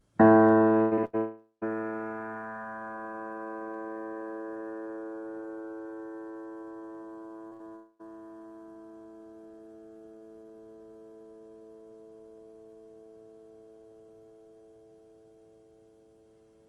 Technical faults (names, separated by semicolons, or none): repeated packet loss (robotic sound); long network dropout; short concealed packet loss; burst of packet loss